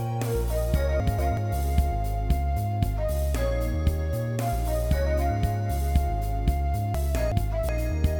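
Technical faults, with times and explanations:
1.0–1.37 s and 6.95–7.69 s, frames out of order: each stretch comes through as a short garbled flutter. Two neighbouring blocks of frames were decoded in swapped order, so the later half plays before the earlier one. The blocks are 186 ms in the first case and 372 ms in the second, which fits runs of two and four frames. The halves are exchanged in place, so no time is lost.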